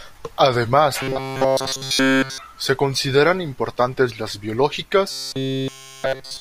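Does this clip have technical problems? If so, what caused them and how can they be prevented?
Yes. From 1.02 to 2.38 s, and again from 5.11 s to the end of the clip, the speech turns into a rigid, metallic buzz near 133 Hz that only loosely tracks the words. This is robotic sound from repeated short buffers, likely caused by audio arriving too slowly, so nearly all of it was replaced by a looped fragment of about 7.5 ms, whose length sets that fixed pitch. Larger buffers or a steadier delivery path would prevent it.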